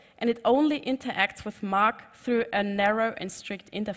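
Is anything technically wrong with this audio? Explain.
No, nothing in this audio points to a technical problem; the signal holds steady and intact throughout.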